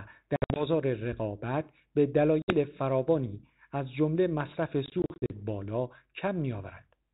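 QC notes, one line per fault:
0.36–0.64 s, packet loss on an ADPCM call: about 140 ms of sound drops to hard-edged silence in several gaps over 200 ms, the longest 60 ms. Each return comes back slightly distorted, because the decoder's adaptive predictor and step size no longer match the sender's. They resettle within some tens of milliseconds.
2.42–2.54 s, packet loss on an ADPCM call: a single clean 60 ms hole, a few packets' worth. The sound resumes with some distortion while the mismatched predictor and step size realign.
4.86–5.42 s, packet loss on an ADPCM call: short dropouts totalling 200 ms, roughly ten packets, scattered over 440 ms, none longer than 40 ms. This repeatedly knocks the decoder's adaptation out of step, so distortion follows the returns across the G.726 band, coded at 32 kbit/s with only light codec damage.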